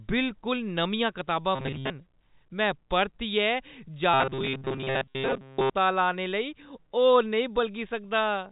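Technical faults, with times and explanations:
1.55–1.90 s, right after "बिलकुल नमियां कताब": robotic sound from repeated short buffers, a rigid metallic buzz near 133 Hz, likely from roughly 7.5 ms of audio being looped while most of the real audio is skipped.
4.14–5.70 s, ending just before "लाने लेई": robotic sound from repeated short buffers, the same 133 Hz buzz held longer, likely as looped fragments replace most of the incoming signal.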